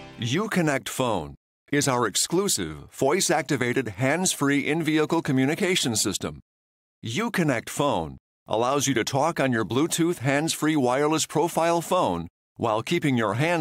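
No technical faults can be heard in this audio.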